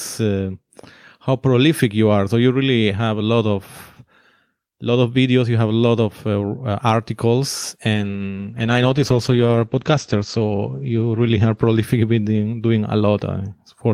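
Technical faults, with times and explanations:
7.94 to 13.39 s, call bitrate drop: the bandwidth estimate collapsed and the encoder cut its bit budget, consistent with a fall from roughly 48 to 12 kbps. The bandwidth shrinks from 20 kHz to 8 kHz, so speech turns muffled and coarse, worst for about 2.9 s.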